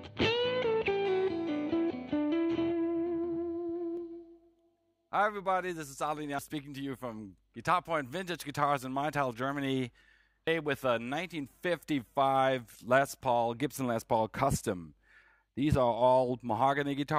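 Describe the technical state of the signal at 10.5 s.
At 10.47 s, compressed frames are skipped. About 200 ms of audio vanishes, roughly two frames of 92.9 ms. The audio jumps ahead at that point.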